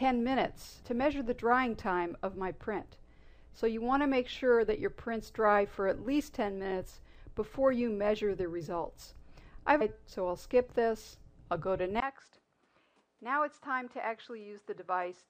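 Stream segment skipped, at 9.80 s: the sound jumps abruptly forward with a brief blip, and the continuity breaks as if a stretch of the programme is simply gone. This is likely a segmented stream where one chunk failed to arrive and the player carried on with the next, so a second or more of material was never played. The join is short and clicky.

Input switched to a poorer device, at 12.00 s and lasting to the end: after a gap of about 20 ms, the sound comes back duller and narrower, with nothing above 11.4 kHz, and drops about 5 dB in level. A new noise floor appears, roughly 40 dB under the signal. The change in tone, level and background at one instant likely comes from the system moving its input to a lower-grade microphone or a headset's call profile.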